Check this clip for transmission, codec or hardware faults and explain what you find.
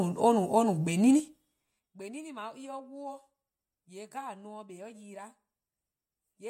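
One fault is present: zipper noise. From 1.11 to 1.88 s, the speech drops by about 25 dB in unsmoothed 3 dB steps, around ten per second. Each step clicks, giving a ticking zip.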